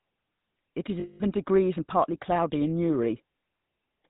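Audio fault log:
Throughout: GSM full-rate codec. The speech carries a plainly audible buzzy, gravelly roughness. The codec rebuilds the voice from a vocal-tract model driven by sparse regular pulses, and nothing above 4 kHz survives. This fits a 13 kbps GSM stream.
1.00–1.21 s: lost GSM frames. For about 0.2 s the sound freezes into a rough, metallic ring. Each missing frame was filled by repeating the settings of the last good one, so the sound is held rather than cutting out.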